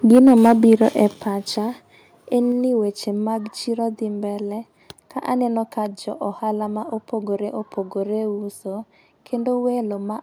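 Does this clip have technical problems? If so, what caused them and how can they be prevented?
Yes. From 0.1 to 1.04 s the loudest syllables carry a harsh, crackling edge, with peaks pushing about 3 dB past the converter's limit and a few percent of samples flattened. This is microphone overload, likely caused by the input volume being set so high that the converter cut off the tops of the waveform. Preventing it means setting the microphone's input gain low enough that the loudest speech peaks stay well below full scale.

The level also drops suddenly twice: by about 2 dB at 0.15 s, during the distorted stretch, and by about 6 dB at 1.14 s, just after it ends. Voice and background fall together, which suggests the microphone volume was stepped down, likely by the call software reacting to the clipping and cutting the device's input volume in single jumps. Setting a sensible input level beforehand, or turning off automatic gain adjustment, avoids these abrupt drops.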